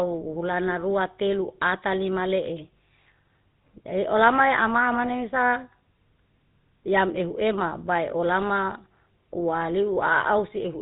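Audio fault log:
throughout, GSM full-rate codec: the speech has a buzzy, gravelly roughness from start to finish, and nothing above 4 kHz gets through. The codec rebuilds the voice from a vocal-tract model driven by a sparse, regularly spaced pulse excitation, and that coarse excitation produces the rasp, which fits the 13 kbps GSM full-rate scheme. Unlike a plain telephone-band filter, which only dulls the sound, this damage is plainly audible as grit in the voice itself.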